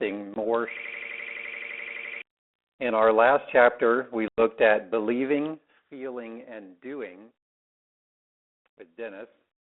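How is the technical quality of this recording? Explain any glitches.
The speech has narrowband telephone-call character, with three clear glitches.

At 0.34 s there's packet loss on the ADPCM call: about 20 ms drops to hard silence, and the speech returns slightly distorted while the decoder's predictor resyncs.

From 0.77 to 2.22 s a system hang loop repeats one 85 ms slice 17 times, a machine-gun stutter at about 11.7 Hz. That fits a 4096-sample buffer cycling while the system froze, and roughly a second and a half of speech is lost.

At 4.28 s, right after "our last chapter we", a second packet-loss gap cuts out about 100 ms, which fits a handful of lost packets. The speech comes back with brief distortion.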